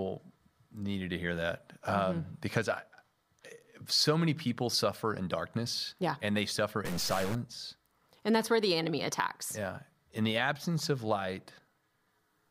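From 6.85 to 7.35 s, a stuck bit, likely from a data line or converter bit holding one fixed value, adds a fixed offset to about half the samples, at a step size near -35 dBFS. Which samples are hit depends on the speech waveform itself, so the error tracks the signal and comes out as harsh, buzzy distortion. Low-level moments in that half second fill with a rough noise floor rather than falling quiet.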